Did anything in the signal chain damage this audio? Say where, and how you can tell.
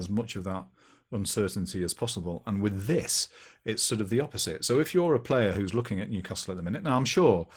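Yes. Throughout the clip the speech sounds hoarse and slightly robotic, with a thin, smeared top end, which is Opus voice compression at the codec stage. The sound suggests hybrid mode near 16 kbps: a coarsely coded SILK core below 8 kHz, with a sparse CELT layer above it.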